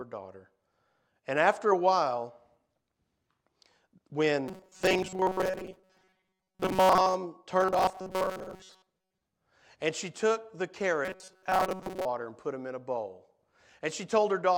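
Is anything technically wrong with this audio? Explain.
Yes, there's a robotic sound from repeated short buffers in three stretches of the speech: 4.48 to 7.14 s, 7.61 to 9.22 s, and 11.05 to 12.05 s. Each time the speech turns into a rigid, metallic buzz at 188 Hz that only loosely tracks what's being said. The likely cause is audio arriving too seldom, so a roughly 5 ms chunk gets replayed over and over for most of each stretch while the real audio is skipped.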